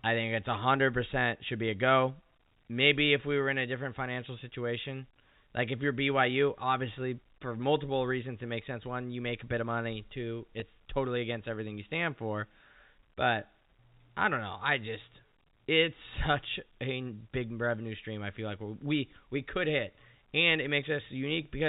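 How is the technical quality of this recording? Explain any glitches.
At 10.60 to 10.62 s, just before "totally against everything you", the speech briefly holds on a slightly buzzy, frozen tone for about 20 ms before carrying on. This is packet loss with pitch repetition. A gap of roughly one 20 ms packet's worth of audio went missing, and the receiver filled it by repeating the last pitch period it had. Because the gap is so short, the repeat never fades to silence and sounds like a tiny sustained buzz. The audio is band-limited in the way G.711 telephone coding produces, with nothing above 4 kHz and only faint quantisation noise.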